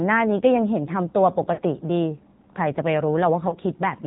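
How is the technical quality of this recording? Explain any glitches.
The quality's fairly rough: the whole clip runs through a low-rate mobile codec, and there are two short dropouts on top of that.

The AMR narrowband mobile codec is present throughout. AMR-NB samples at 8 kHz, so nothing above 4 kHz survives, and the speech is rebuilt from a vocal-tract model fed with a few pulses per subframe. The damage is plainly audible: the speech sounds boxed-in, buzzy and a bit synthetic, which fits a low mode of around 7.4 kbps.

There are also lost AMR speech frames at 1.54 to 1.60 s and 3.50 to 3.56 s. The first gap is about 40 ms of lost audio, and the second about 20 ms. When frames fail their checksum, the decoder fills in by repeating the last good pitch and vocal-tract settings at a lower gain. You hear a brief dip or warble, with the sound smeared for a moment and coming back weak or rough.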